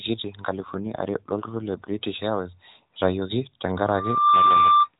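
A speech clip over a narrowband mobile link, with everything above 4 kHz missing throughout, shows an AMR rate drop from 0.58 s to 1.94 s: the voice turns rougher, buzzier and more synthetic, then recovers. The degradation fits a weak radio link forcing the codec from 12.2 down to about 5.9 kbps. On a spectrogram the 4 kHz ceiling and continuity stay intact, with no gap in the waveform, but harmonics smear and formants coarsen for that stretch.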